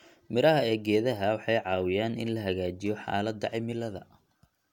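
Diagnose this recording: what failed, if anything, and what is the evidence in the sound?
Nothing in the speech recording points to a failure at any stage of the chain. No event anywhere in the sound calls for a diagnosis.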